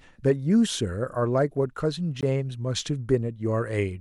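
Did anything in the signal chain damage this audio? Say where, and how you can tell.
Yes. At 2.21 s the speech drops to silence for 18 ms and then resumes. This is likely a Bluetooth stall in the wireless playback link: radio interference delayed packets, the headphones' buffer emptied, and output paused until resent data arrived. A brief codec glitch or a clipped edit would leave a click, smear or tonal artefact. This gap is silence with an abrupt restart, which marks it as a buffer running dry.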